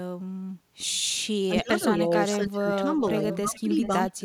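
A speech recording with echo leak from 1.43 to 2.37 s, 3.15 to 3.38 s and 3.55 to 4.1 s: a copy delayed by about 420 ms, about 15 to 20 dB below the talker, likely from a loudspeaker's echo canceller letting residual pickup through. Speech suppressed in double talk dips the talker by roughly 20 to 25 dB at 1.61 to 1.82 s, 2.37 to 2.66 s and 3.41 to 3.69 s, and slightly from 4.2 s to the end, as the canceller likely ducks overlapping speech.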